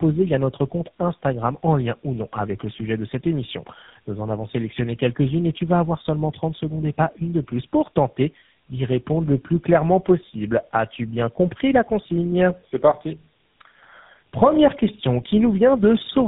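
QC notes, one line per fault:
Throughout: tandem speech coding, three speech codecs in a row ending in GSM full rate; each re-encodes the last one's damage, so the speech sounds rough, muffled and warbly, with nothing above 3.8 kHz.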